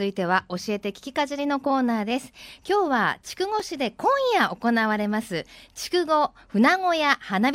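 At 3.60 s there's a block of digital silence, about 2.9 ms long, which fits a 128-sample buffer that went out empty. The speech drops out and back with no fade, so it comes across as a tick or dip.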